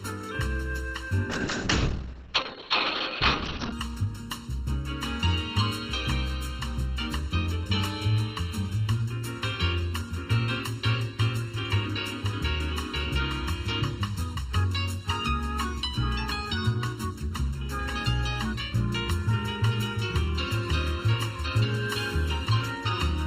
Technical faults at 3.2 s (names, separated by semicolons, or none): channel delay (comb filtering); call bitrate drop